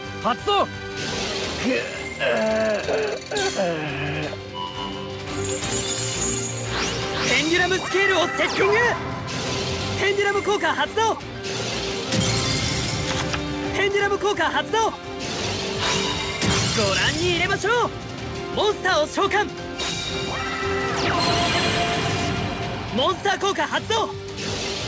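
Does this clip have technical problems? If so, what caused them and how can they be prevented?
No, nothing stood out as a technical problem on listening to this clip.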